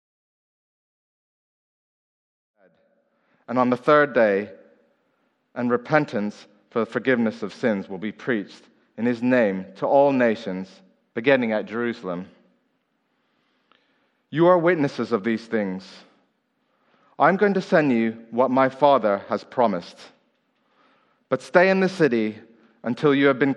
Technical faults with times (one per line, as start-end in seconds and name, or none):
0.00-23.56 MP3 compression